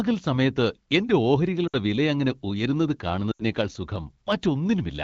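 In this speech clip the sound briefly drops to near silence after "സമയത്ത് എന്റെ" at 1.67–1.74 s (60 ms, three 20 ms frames) and after "വിലയങ്ങനെ ഉയരുന്നതു" at 3.32–3.43 s (80 ms, four frames). These are lost AMR speech frames: the wideband decoder, running at 12.65 kbit/s, replayed the previous voice parameters with decaying gain.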